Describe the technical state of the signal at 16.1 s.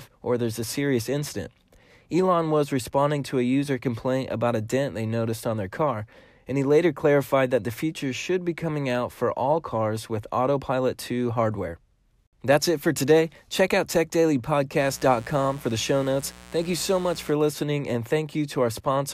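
At 16.1 s a mains buzz sits under the speech. It runs from 14.76 s to 17.34 s and stops just before "listening and". Sharp switching spikes from something like a dimmer, a rectifier or a missing shield get into the signal twice per cycle of the 60 Hz supply. Their harmonics stack up into the kilohertz range. The result is a steady, raspy buzz, roughly 20 dB below the speech.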